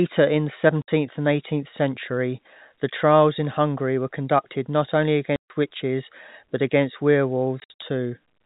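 Packet loss filled with silence cuts the speech three times. At 0.82 s, after "in the", a 60 ms hole opens. At 5.36 s, after "were conducted not only", the gap lasts 140 ms. From 7.6 to 7.8 s, short dropouts are scattered, the longest 60 ms. Each hole has hard edges, and the lengths fit 20 ms packets.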